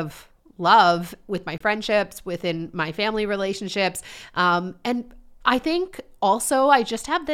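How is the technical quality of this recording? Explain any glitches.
The recording has one glitch. At 1.58 to 1.62 s, right after "love with my", the speech cuts out for about 23 ms. The sound then comes back as if it had kept playing underneath. This is most likely a Bluetooth dropout. A packet on the wireless link arrived too late and was discarded, so the output fell silent. The gap's length fits a single lost frame.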